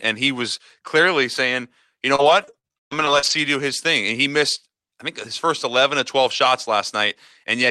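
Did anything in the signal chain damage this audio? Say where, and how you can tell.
Yes: repeated packet loss (robotic sound) at the network stage, 2.15 to 3.32 s, between "was clearly saying you" and "do his thing and". Nine gaps, the longest 131 ms, were patched by stretching the preceding sound, so about 29% of that stretch is concealed and it turns choppy.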